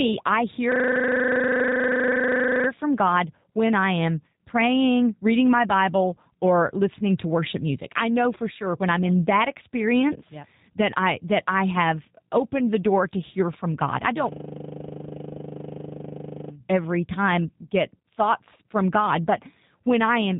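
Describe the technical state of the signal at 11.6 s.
At 11.6 s the speech carries G.729 codec damage, present throughout the clip. The sound is rebuilt from a vocal tract filter, pitch prediction and sparse pulses, which fits an 8 kbit/s codec. It is plainly rough and synthetic, with nothing above 3.8 kHz.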